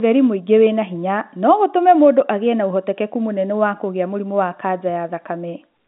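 No technical faults are audible.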